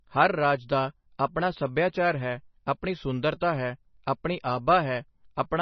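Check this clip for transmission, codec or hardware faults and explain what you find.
Two faults are present: heavy codec damage across the whole clip, and one pre-echo.

Across the full clip there is no content above about 5.9 kHz, and the remaining band sounds watery and swirly, with sibilants turned metallic and chirpy. This is likely MP3 compression at a very low bitrate, around 24 kbps. Starved of bits, the encoder cuts the treble at a fixed frequency and drops weak frequency lines. Those lines flicker on and off from frame to frame, which causes the swirl and smears consonant onsets.

At 3.40 s, between "ਆਪਣਾ ਸੱਭਿਆਚਾਰ ਹੈ ਆਪਣੀ" and "ਹੈ ਆਪਣੀ", a pre-echo appears as a brief hiss about 10 ms ahead of a sharp onset. The codec spreads its quantisation noise evenly across each transform block. Because this attack falls late in its block, noise sized for the loud part leaks into the quiet gap before it. 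The result is a hiss just before the onset and an attack that sounds softened.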